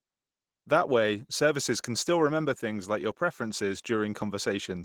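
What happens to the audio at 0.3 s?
At 0.3 s, as throughout, Opus voice compression at roughly 16 kbps coarsens the excitation, making speech hoarse and faintly robotic, not merely dull like simple low-pass filtering.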